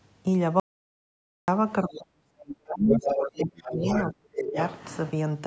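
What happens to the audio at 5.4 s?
At 5.4 s the speech carries on intact, with no dropout, click or distortion, only the normal band limiting of call microphone processing with nothing above 8 kHz.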